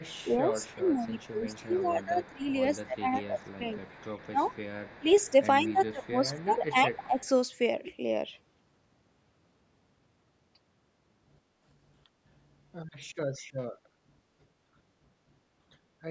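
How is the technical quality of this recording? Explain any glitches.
The first seven seconds of the speech carry two linked call-processing faults: echo returning from the far end, and the talker's own voice being pushed down while both sides overlap. The audio stops at 8 kHz.

Echo leak runs from 0.0 to 2.87 s, 3.23 to 5.32 s, 6.05 to 6.62 s and 6.93 to 7.26 s. A faint, delayed copy of the speech trails it by a fixed 165 ms, mostly about 30 dB down and nearer 25 dB around 6.05 s. The likely cause is a speakerphone whose echo canceller let part of its loudspeaker pickup through. Room reverberation would smear the sound continuously. This echo is a distinct, fixed-offset repeat.

Speech suppressed in double talk occurs from 0.25 to 2.49 s, 2.85 to 3.84 s, 4.26 to 4.53 s and 5.0 to 7.19 s. During these spans the voice dips by roughly 15 to 20 dB in pieces, adding up to around a second or more in the longer spans. 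Here the echo canceller likely could not separate the near talker from the loudspeaker echo and attenuated both. Packet loss would cut the sound abruptly. These dips follow the overlapping speech.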